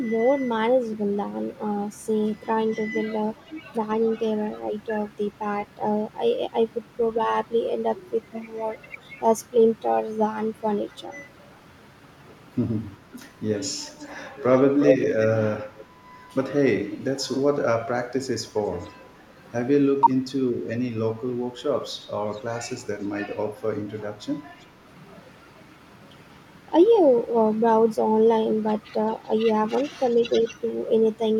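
A faint delayed copy of the speech trails in at 13.89 to 14.07 s, about 30 dB down, then returns at 14.49 to 15.26 s at roughly the same level as the speech itself, and again faintly at 15.76 to 15.85 s. Each copy lags by 363 ms. This is echo leak, likely from a far-end loudspeaker whose canceller let its microphone pickup through. A weaker scrap follows at 18.8 to 18.9 s, now delayed 415 ms.

From 20.01 to 20.24 s the speech abruptly drops away for about 200 ms, falling by roughly 40 dB before recovering. This is speech suppressed in double talk, likely where both sides spoke at once and the echo canceller, unable to separate the local talker from the returning echo, turned everything down.

Quiet echo leak recurs at 22.01 to 22.4 s, about 30 dB down with a 415 ms lag, and at 30.1 to 30.2 s, about 35 dB down with a 381 ms lag.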